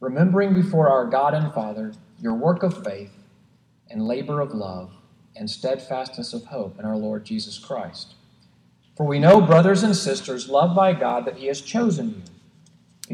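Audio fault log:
0.55–12.86 s, clock drift buffer slips: a regular click recurs every 1.76 s, about seven times. Likely two unsynchronised clocks disagreeing by around 200 ppm, so the buffer between them periodically drops or repeats roughly 15 samples, and each discontinuity pops.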